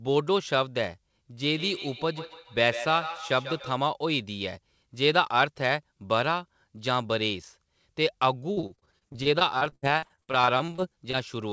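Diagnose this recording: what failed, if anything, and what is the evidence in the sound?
Two faults occur in the speech. From 1.52 to 3.86 s there is feedback echo between two devices. A second device in the room replays this speaker's audio, and the microphone picks it up again. The local echo canceller cannot remove it because it only cancels what its own device plays. Each syllable returns at a fixed spacing of roughly 150 ms, peaking at about 11 dB below the speech. On a spectrogram this shows as evenly spaced copies of each harmonic stack trailing the original, growing thinner with each pass.

From 8.52 to 11.15 s there is repeated packet loss (robotic sound) on the network leg. Around thirty short holes, the longest 66 ms, are patched by stretching the preceding sound, so about a quarter of the span is concealed rather than real. The result is choppy speech with pieces missing. In the waveform this appears as rapid runs of suspiciously periodic, copied cycles. 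On a spectrogram it shows as smeared, flat-topped harmonics broken by brief dropouts, all under the 8 kHz ceiling, which fits a wideband codec such as G.722.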